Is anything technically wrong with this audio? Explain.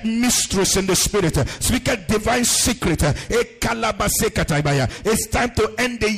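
Yes. At 1.99, 3.99 and 5.99 s there are periodic USB or driver dropouts: something blocks the audio path every 2.0 s, cutting roughly 4 ms to silence. They are heard as evenly spaced ticks, and that strict regularity separates them from random clicks or network glitches.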